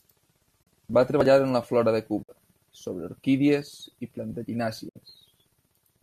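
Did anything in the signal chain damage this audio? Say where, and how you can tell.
Yes. AAC frame loss with muting at 0.63–0.67 s, 2.23–2.29 s and 4.89–4.96 s leaves soft-edged holes of 40, 60 and 70 ms. The decoder set the lost frames' spectrum to zero, and overlapping windows faded the speech out and in. The hole lengths fit 10 ms frames of likely low-delay AAC compression.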